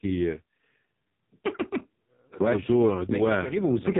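Speech runs through the AMR narrowband mobile codec for its whole length. Nothing above 3.8 kHz survives, and heavy codec damage leaves it buzzy and synthetic, which fits AMR-NB's lowest 4.75 kbps mode. A plain low-pass filter would only muffle the sound, not add that vocoder buzz.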